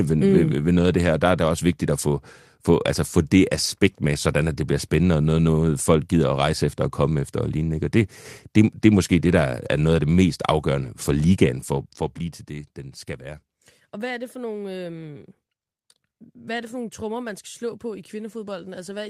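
From 11.54 to 12.52 s the speech drops by roughly 15 dB, and the fade carries zipper noise. The gain moves in a staircase of several hundred small unsmoothed steps per second instead of a continuous ramp, and each jump leaves a tiny click, heard as a fine buzzy ticking riding on the voice while the level falls. On a waveform the envelope shows a faintly serrated edge through that span; a spectrogram shows a haze of regularly spaced vertical lines across the band.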